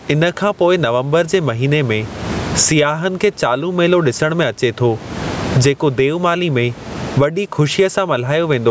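This is a speech clip with gain pumping throughout. The level swings by roughly 25 dB. Loud and quiet passages sit close together, so the sound is squashed. The likely cause is input gain set far too high, with a fast limiter or compressor pulling it back on each loud sound. The room noise is about 30 dB below the speech.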